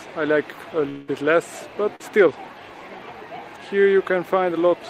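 From 0.89 to 1.10 s the sound breaks into a fading buzz or hiss. This is likely a long network dropout. About 180 ms of audio never arrived. The receiver stretched the last sound across the gap without falling silent. The sound resumes afterwards with that part missing.

At 1.96 to 2.02 s there is a short concealed packet loss. About 40 ms failed to reach the decoder in time. The receiver extended the preceding sound to fill the hole. It is heard as a brief smear before the audio blends back.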